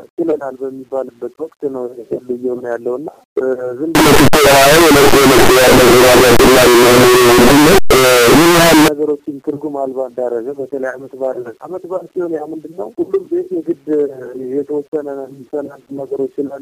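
From 3.95 s to 8.88 s the 8-bit samples were likely read with signed and unsigned mixed up, flipping the top bit so that every zero crossing leaps across the full range. The result is loud, harsh distortion in which quiet moments are as loud as the rest.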